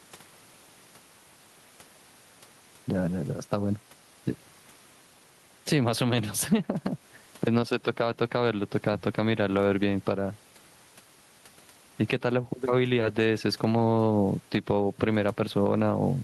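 All the way through the speech you get gain pumping: the gain swings by something like ten decibels. That's most likely a mic gain cranked far too high with a fast limiter or compressor clamping down on each loud syllable, so the delivery sounds squashed. The room noise itself sits about 40 dB under the speech.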